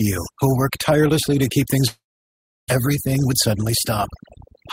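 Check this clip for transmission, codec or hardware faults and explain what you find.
Three faults are audible in this speech clip: heavy-handed noise suppression across the whole recording, a gap in the middle, and a short hurried stretch after it.

Overdone noise removal, throughout: the pauses fall to near silence scattered with faint twinkling specks. A noise reduction stage set far too aggressively is switching individual frequency bands down or off whenever they sit close to its noise estimate. The softer components of the voice get caught along with the background, which leaves those isolated tonal blips behind.

Long network dropout, 1.87 to 2.72 s: just after "work tirelessly to keep", the speech stops and is replaced by a brief fading continuation of the last sound, then about 0.69 s of silence before speech resumes. About 0.6 s of speech never comes back. The likely cause is a run of packets that never arrived. 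The receiver extended the final sound to cover the gap and then muted, and playback picked up later without the missing part. The playout delay shifted by around a fifth of a second.

Jitter buffer speed-up, 2.88 to 3.72 s: right after the dropout the speech runs noticeably quick, about 110% of normal speed, yet the pitch stays put, so it sounds rushed rather than higher. The buffer held more than its target. The receiver removed many short slices one or a few pitch periods long, trimming roughly a tenth of a second in total to bring the delay back down.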